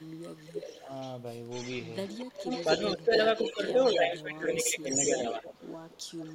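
From 0.0 to 1.16 s, 1.5 to 2.93 s, 3.13 to 4.03 s and 4.9 s to the end, an echo leak trails the speech by about 250 ms, likely from a loudspeaker echo canceller letting its microphone pickup through. It starts faint, is loudest around 3.1 to 4.0 s, and shows on a spectrogram as a delayed, weaker copy of each speech pattern.

Speech suppressed in double talk dips the speech by about 10 to 15 dB at 2.94 to 3.12 s, 3.54 to 3.74 s and 3.97 to 5.42 s. The likely cause is the canceller turning down both talkers during overlap. The waveform envelope sags.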